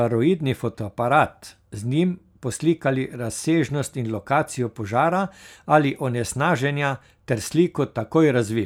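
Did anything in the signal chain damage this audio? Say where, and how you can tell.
No, nothing along the chain from capture to playback audibly damaged this speech.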